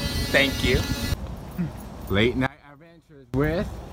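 From 2.47 s to 3.34 s, the audio behaves as if one channel inverted, likely a polarity flip on one side of the stereo pair. When the two channels are summed to mono, everything they share cancels, so the level drops by about 26 dB across that stretch. What survives is only the difference between left and right: a faint residue with the centre hollowed out, before the full sound returns at 3.34 s.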